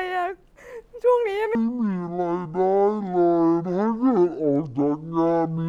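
A section at the wrong speed runs from 1.55 s to 5.68 s, where playback drops to half speed. The speech turns slow and deep, roughly ten semitones lower, which is likely from the audio being played against the wrong clock.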